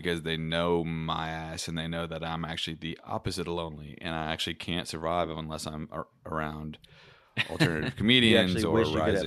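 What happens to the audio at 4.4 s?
Nothing goes wrong at 4.4 s; the speech carries straight through that moment with no dropout, click, glitch or other fault.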